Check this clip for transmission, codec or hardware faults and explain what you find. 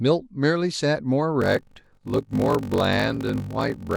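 One fault is present, a block size mismatch with zero padding, running from 1.40 s to the end of the clip at 3.97 s.

From 1.40 s the speech takes on a steady buzz at 46.9 Hz and slows to 0.861 times its normal speed while keeping about its normal pitch. The cause is a handoff between two stages: the writing stage delivers shorter blocks than the reading stage expects, which fits a 1024-sample read block. Each block's missing tail is filled with silence. That brief gap recurs once per block, producing the buzz, and the padding stretches the timeline by the ratio of the two block sizes.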